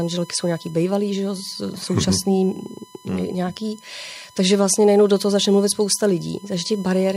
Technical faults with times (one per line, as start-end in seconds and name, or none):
0.00-7.16 USB whine